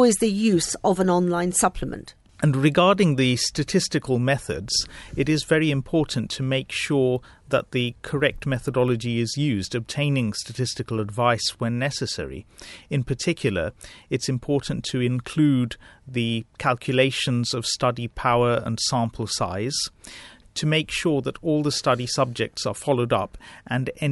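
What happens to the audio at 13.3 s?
Nothing goes wrong at 13.3 s; the speech continues intact through that moment with no audible fault.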